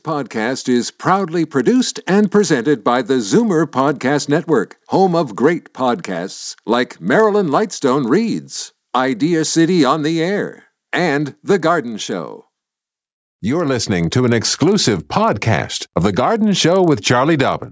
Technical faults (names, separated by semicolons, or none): resampler restarted on every block